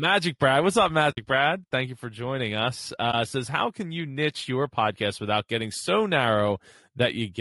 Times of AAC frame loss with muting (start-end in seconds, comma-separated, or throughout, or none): 1.11-1.18, 3.11-3.14